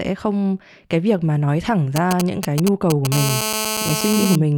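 From 1.96 to 3.07 s a galloping dit-dit-dit of brief 217 Hz buzzes cuts in, only slightly quieter than the speech. These are GSM signalling bursts: a nearby 2G phone sending short groups of radio pulses while signalling, which the audio circuitry rectifies into audible clicks.

At 3.12 s a hard, raspy buzz at 217 Hz, rich in harmonics and about 4 dB below the speech, takes over and runs steadily until 4.36 s. This is GSM phone buzz, consistent with the same phone now in a call, transmitting bursts 217 times a second that the circuitry demodulates.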